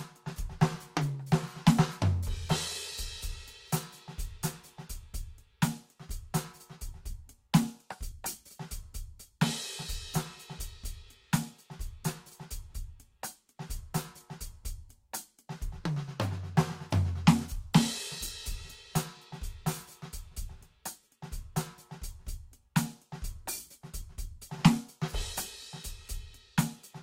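Music clip, no audible faults.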